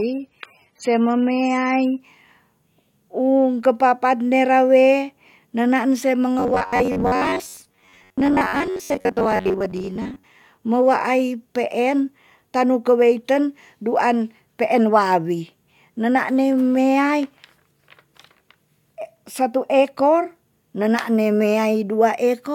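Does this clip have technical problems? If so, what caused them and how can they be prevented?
Yes. The adaptive stream starts at a low bitrate from 0.0 to 2.0 s. The player opens on a cheap version, which sounds like roughly 27 kbit/s AAC, so treble is thin and artefacts are stronger until it abruptly switches to a fuller stream. Starting on a higher tier, or buffering briefly before playback, prevents this.

Robotic sound from repeated short buffers runs from 6.40 to 10.24 s. There is a rigid metallic buzz at 93.8 Hz, most likely because audio arrived too seldom and the last buffer of about 10.7 ms was repeated in place of roughly half the real audio. Larger jitter buffers and a steadier network feed prevent it.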